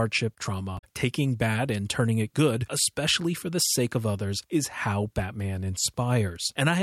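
At 0.75 s a short glitch cuts into the speech, lasting about a tenth of a second, until 0.84 s. This is damaged data in a compressed stream: a stretch of the encoded bitstream was corrupted, so the decoder misread or rejected the frames there and lost sync. For that moment the sound broke down while it searched for the next valid frame header to lock back onto.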